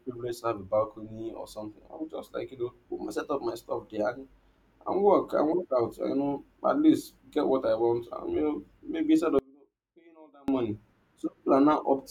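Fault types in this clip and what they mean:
Audio dropout to a faint residue: just after "you know maybe instead", the speech cuts out abruptly at 9.39 s and returns at 10.48 s. The roughly 1.1 s gap keeps only a faint trace of sound, about 30 dB below the speech, likely from a brief upstream signal loss while the later path stayed live. Unlike a dropout to digital silence, the gap is not dead. Unlike a pause or fade, it starts and ends sharply.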